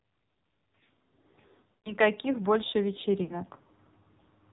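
Throughout the speech, the AMR narrowband mobile codec is audible: nothing passes above 4 kHz, and the voice has a buzzy, synthetic edge, consistent with a low AMR-NB mode around 5.9 kbps. That rate leaves only a few pulses per subframe to drive the vocal-tract model, so the damage is heavy. Unlike plain low-pass filtering, it does more than dull the top end. The sound itself is rebuilt and turns coarse and artificial.

From 1.72 to 1.93 s, lost AMR speech frames break the signal. The decoder keeps repeating its last good pitch and vocal-tract settings at falling gain, so the sound stretches and fades toward silence over roughly 120 ms, about six frames, before recovering weak and rough. A shorter loss at 3.24 to 3.41 s covers about 40 ms, two frames, and sounds like a brief warbling dip. A dropout cuts to silence at once, but concealment smears out and fades instead.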